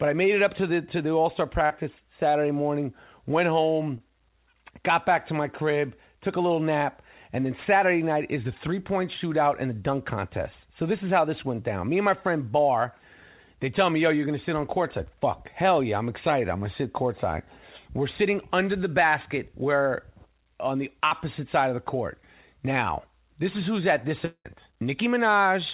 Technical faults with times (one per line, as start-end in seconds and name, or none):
1.66-1.72 short concealed packet loss
3.98-4.02 short concealed packet loss
21.08-21.13 short concealed packet loss
24.25-24.47 long network dropout